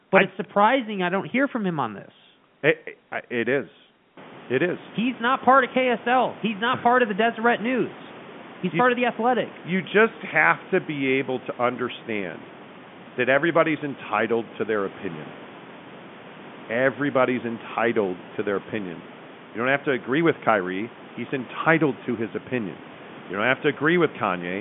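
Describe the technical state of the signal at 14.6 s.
Around 14.6 s the audio is intact, with only the ordinary room noise, about 21 dB under the speech, and the narrow telephone band of G.711 coding, with nothing above roughly 3.7 kHz.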